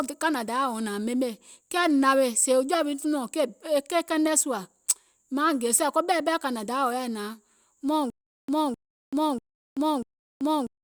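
Speech that breaks into stutter with silent gaps from 8.10 s to the end: a 0.26 s fragment plays four times, each followed by 0.38 s of digital silence. The waveform shows identical blocks between flat lines, the spectrogram matching slices between blank columns, likely from a stalled stream retrying.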